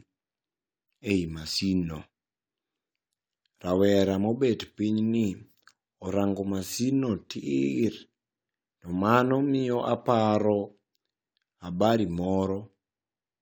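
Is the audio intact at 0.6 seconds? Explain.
Yes, at 0.6 seconds the speech plays through cleanly, with no dropout, click, distortion or other fault to be heard at that point.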